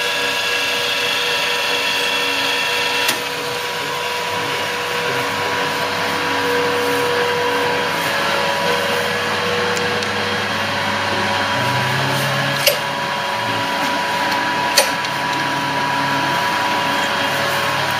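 No dropouts, distortion, noise bursts or timing irregularities are present anywhere in the clip.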